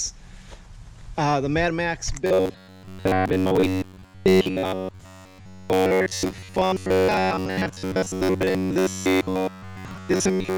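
From 2.26 s to the end, the audio turns into robotic sound from repeated short buffers: a rigid, metallic buzz at 93.8 Hz, likely from a roughly 10.7 ms segment being looped while most of the real audio is skipped. Unlike codec warble, the buzz stays locked and fixed.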